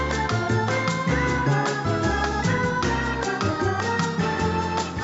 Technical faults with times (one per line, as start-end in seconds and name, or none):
none